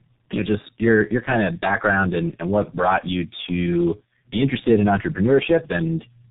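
Right from the start and all the way through, the speech has that tandem speech coding sound: rough, muffled and warbly, with nothing above about 3.8 kHz. It sounds like two low-rate coders in a row, G.729A-like then G.723.1-like, the second re-encoding the first's already damaged output.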